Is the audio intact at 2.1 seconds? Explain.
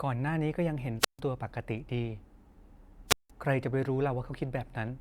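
Yes, at 2.1 s the speech plays through cleanly, with no dropout, click, distortion or other fault at that moment.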